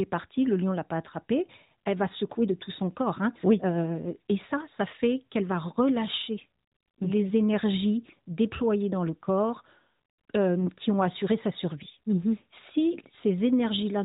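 A speech clip over an AMR narrowband mobile link, where radio errors corrupted a speech frame and the decoder concealed the lost AMR speech frames by replaying its last good pitch and vocal tract settings at reduced gain. From 10.60 to 10.69 s, just before "qui ont assuré sa", this produces a brief dip or warble, consistent with a single 20 ms frame, before the 4 kHz-limited codec sound recovers.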